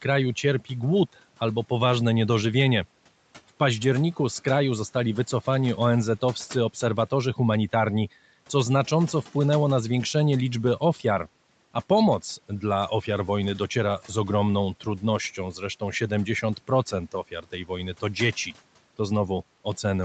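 Between 17.12 and 17.7 s, the noise suppressor cuts into the speech. It mistakes soft speech for background noise and pulls it down by about 11 dB at its deepest. Roughly 150 ms of sound turns faint and swallowed. The room noise sits about 25 dB below the speech, and the call path tops out near 8 kHz.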